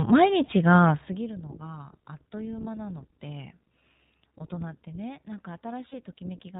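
The whole clip carries iLBC codec damage, and it is plainly audible. Nothing above 4 kHz survives, so the speech sounds narrowband and dull. The voice is clear but rough and a little synthetic. Each short block is coded on its own, without help from the one before. The sound points to 20 ms frames, which fits the 15.2 kbps mode.

At 0.46 s come lost iLBC frames. The gap runs to 0.49 s. The decoder fills it by repeating the last pitch cycle with added noise. It sounds like a brief held, buzzy vowel. This fits one lost frame. At 5.88 s a longer gap runs to 5.95 s, likely two lost frames. After each gap the voice comes back clean almost at once, because every frame decodes independently.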